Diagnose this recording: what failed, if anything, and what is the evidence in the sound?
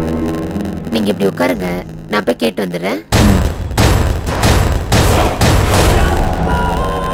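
A block size mismatch (padded) at the driver or buffer stage: one stage hands on blocks shorter than the next stage reads, and the shortfall in each block is filled with zeros. The result is a tiny silent gap once per block, which runs through the whole recording as a steady 91.9 Hz buzz. The gaps also stretch the timeline, so the sound plays at 0.919 times normal speed, about 8% slow, while its timbre stays the same.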